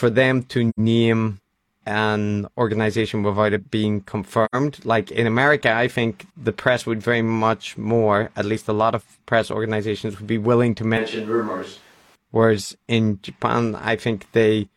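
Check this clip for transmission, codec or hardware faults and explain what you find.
Three faults are audible: two AAC dropouts and one stretch recorded on a distant microphone.

AAC frame loss with muting occurs at 0.69 s, after "them to", and at 4.44 s, after "organization without it being". Each time about 85 ms went missing, which fits two lost frames whose spectrum the decoder zeroed. Overlapping windows fade the sound out and back in, leaving a soft-edged gap of about 0.1 s.

From 10.97 to 12.16 s, just after "would be willing to", the close microphone's feed likely dropped out and the recording switched to a distant microphone. The speech suddenly turns roomy and hollow, with thinner bass, and drops about 5 dB. Room noise rises to roughly 30 dB below the speech, then the close sound abruptly returns.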